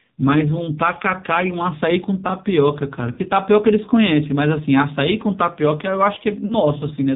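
The whole clip carries the sound of the AMR narrowband mobile codec: nothing above 4 kHz, and a buzzy, synthetic edge on the speech that fits one of the low modes, around 5.9 kbps, where the few pulses per subframe can't model the voice cleanly.

At about 3.12 to 3.19 s there are lost AMR speech frames. The decoder stretches the last good pitch and vocal tract settings while the gain drops, giving a smeared, fading gap of roughly 60 ms, about three frames. The same happens more briefly at 6.46 to 6.55 s, with about 40 ms concealed, and the speech comes back a little rough.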